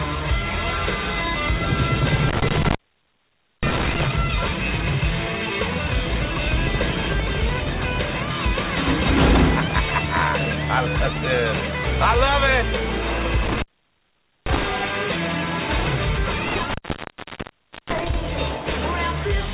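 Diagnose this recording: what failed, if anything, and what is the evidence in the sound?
A loose connection in the analogue wiring opened three times, an intermittent contact. The sound cuts out with crackle at each edge around 2.29 to 4.08 s, 13.45 to 14.63 s and 16.48 to 18.14 s, open for 0.88 s, 0.84 s and 1.16 s, leaving faint hiss.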